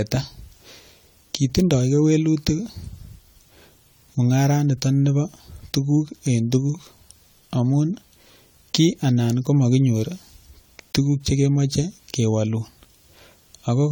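From start to finish the speech carries a swirly, hollow texture, with consonant onsets smeared. This is generation loss, the likely result of several lossy encode and decode cycles, perhaps about four, with a character that points to AAC-LC at around 64 kbit/s. Each pass requantised on a shifted frame grid, so noise and spectral gaps accumulated beyond what a single encode would leave.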